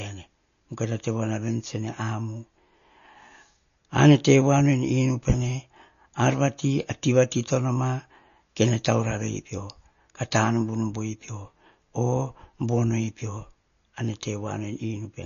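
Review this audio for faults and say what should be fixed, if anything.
MP3 compression runs through the whole speech clip, likely from a low bitrate around 34 kbps: everything above 6.9 kHz is gone, with watery swirl. Encode at a higher bitrate or keep a lossless master.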